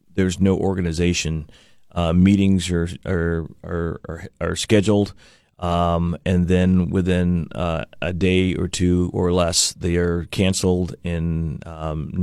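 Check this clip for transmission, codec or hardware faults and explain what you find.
No transmission or hardware faults.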